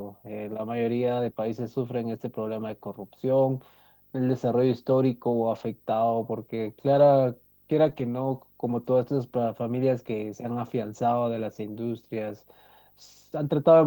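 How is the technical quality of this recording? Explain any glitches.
The recording has two problems: a steady video buzz under the whole clip, and five short patches where speech turns rough.

Video or display buzz runs throughout. A screen or video cable is coupling interference into the audio path, putting a buzz at the 50 Hz field rate, with hash layered above it, into the signal, plus a whine at the 15.6 kHz line rate. It sits roughly 35 dB below the speech, so it is quiet but constant.

Lost packets rebuilt from error correction occur at 5.51–5.65 s, 6.95–7.01 s, 7.87–8.05 s, 8.69 s and 10.89–10.99 s. In each case audio packets failed to arrive, but the next packet carried a low-bitrate backup copy, so the decoder played that instead of leaving a gap. The replaced stretches last about 80, 40, 100, 20 and 60 ms. They sound briefly coarse and noisier.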